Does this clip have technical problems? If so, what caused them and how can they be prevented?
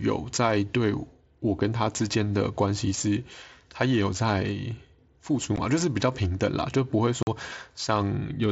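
Yes. Unconcealed Bluetooth headset packet loss occurs at 5.56 s and again from 7.23 to 7.27 s. On the headset link, blocks of speech went missing and nothing filled the gaps, so the sound drops out with hard edges that can click. The first hole is 15 ms long and the second 45 ms, which fits about two and six lost 7.5 ms frames of the mSBC stream. To prevent this, keep the headset close to the phone with a clear path, reduce competing 2.4 GHz traffic, and use a device with packet loss concealment.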